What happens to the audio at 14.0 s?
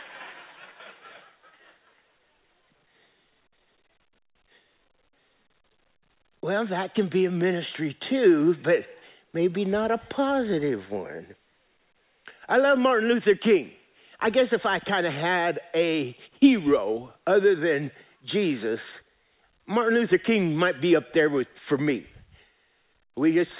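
Nothing goes wrong at 14.0 s: the speech there carries on intact, with the narrowband telephone sound of the call path, nothing above 4 kHz, which fits a G.711 A-law codec.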